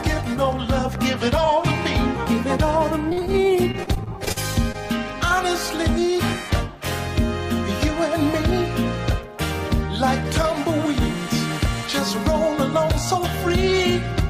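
From 3.09 to 3.36 s, then again from 3.72 to 4.76 s, there's repeated packet loss giving that robotic sound: packets keep dropping, each hole gets papered over by stretching the last bit of audio, and the next gap arrives before it settles. The result is choppy, with short chunks missing outright.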